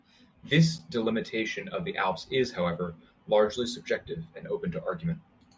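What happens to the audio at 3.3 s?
Nothing happens at 3.3 s; the speech plays through that moment intact, with no dropout, click or distortion.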